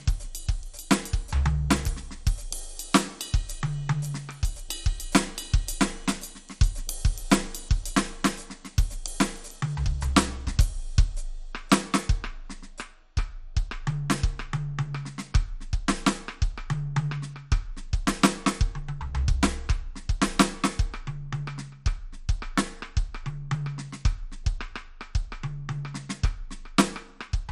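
Throughout the music, the sound is dull and gurgling, with a granular grit. Nothing is heard above 14.3 kHz. The cause is likely MP2 compression at a rate that fits 64 kbps. Upper sub-bands are starved of bits and switched off. The rest are coarsely quantised.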